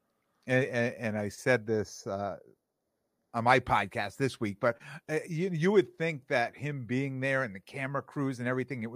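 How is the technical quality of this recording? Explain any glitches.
There is one glitch, channel delay (comb filtering), from 1.68 to 3.33 s, between "and and I said" and "on my podcast this". One channel lags by a fraction of a millisecond. Summed to mono, it cancels evenly spaced frequencies starting around 3 kHz, so the speech turns hollow and phasey.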